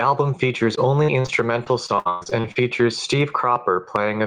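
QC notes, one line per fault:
Throughout: gain pumping. The level swings by around 10 dB, so loud and quiet parts sit unnaturally close together. The likely cause is input gain set far too high, with a fast limiter pulling it back down on every peak.
0.75–2.57 s: repeated packet loss (robotic sound). About a dozen short dropouts arrive in quick succession, the longest near 118 ms. Some holes are bridged by stretching the preceding sound, while others simply drop out, making the passage choppy with pieces missing.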